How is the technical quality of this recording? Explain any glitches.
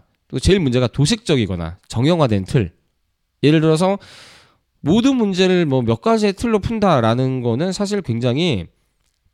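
The signal comes through without any audible glitches, dropouts or distortion in the recording chain.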